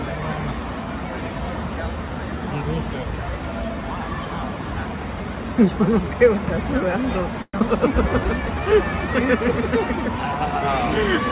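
At 7.42 s the incoming packet stream likely stalled in a long network dropout, leaving the receiver with nothing to play until about 7.62 s. It stretched the last sound into a fading buzz that fills roughly the first 180 ms of the gap, followed by a brief silence. When the audio resumes, about 80 ms of material is gone and the timing has shifted by a few tens of milliseconds.

From 8.09 s to 8.61 s the jitter buffer, now short of reserve, triggers a jitter buffer slow-down. It rebuilds its cushion by repeating single pitch periods, inserting about 85 ms in total. Playback runs at about 85% speed while the pitch stays put, so sounds are drawn out, all within the 4 kHz band of the G.711 call path.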